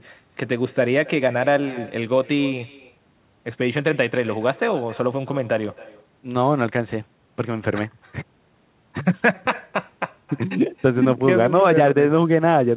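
From start to finish, every phrase is trailed about a third of a second later by a faint, thin copy of itself, sitting about 20 dB below the direct speech. This is echo with no canceller: the far end is playing the call through a loudspeaker, its microphone is picking that up, and nothing strips it out, so the sound returns after the network round trip, all within a narrowband call path that carries nothing above 4 kHz.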